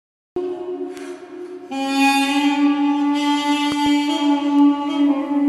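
Cut-off start, 0 to 0.36 s: the first 0.36 s are digital silence, and at 0.36 s the audio appears abruptly in the middle of a sound, with no attack or fade-in. The recording or stream began after the sound was already under way.

Bit error spikes, 0.97 s and 4.59 s: each is a single sharp tick, broadband and unrelated to the surrounding sound. A flipped bit on a digital link or in memory threw three consecutive samples off by a power of two before the values snapped back.

Loud pop, 3.72 to 3.88 s: two pops in quick succession sit on top of the sound, peaking roughly 5 dB above it, while the audio continues underneath. The likely cause is a voltage step or pulse from a plug, a switch, static or a driver glitch, shaped in the circuits after it.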